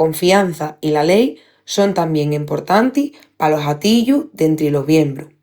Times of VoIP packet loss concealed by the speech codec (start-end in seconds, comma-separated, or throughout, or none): none